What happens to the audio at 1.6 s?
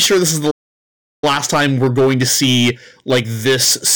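At 1.6 s the speech is inside a stretch of time-compressed catch-up that runs from 1.24 s to the end of the clip. Having fallen behind, the player trims its backlog by cutting out short slices and cross-fading across the joins, so the speech moves about 1.1 times faster. Pitch stays where it was, which separates this from a simple faster-playback or resampling error that would raise the pitch. The giveaway is speech that sounds hurried while keeping its normal pitch.

Over the same moment, and across the whole clip, hard clipping is present. The speech is driven about 9 dB beyond what the signal path can carry, so around a tenth of the samples have their peaks cut flat. Those flat tops add harmonics high in the spectrum, producing a harsh fuzz on the louder syllables. It differs from soft saturation, which rounds peaks gently and sounds warmer rather than gritty and abrupt.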